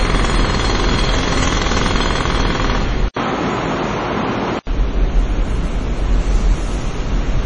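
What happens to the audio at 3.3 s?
At 3.3 s the sound is inside a stretch running from 3.08 s to 4.67 s where it turns duller and boxier. This is most likely an input switched to a poorer device partway through the recording. It opens with a gap of about 80 ms at 3.08 s. The band then narrows to nothing above 7.6 kHz, and a faint new background noise sits well below the sound while the level stays roughly the same. At 4.67 s the fuller tone returns. The abrupt start and end, the silent gap and the changed noise floor set it apart from codec loss.

Beneath that, and running through the whole clip, is heavy MP3 compression, likely at a low bitrate near 32 kbps. The treble stops hard at 10.4 kHz. Weak frequency lines drop in and out from frame to frame, which gives a watery, swirling texture with metallic chirps on bright transients and smeared attacks. It differs from the device switch because it stays constant from start to finish, with no step at 3.08 s or 4.67 s.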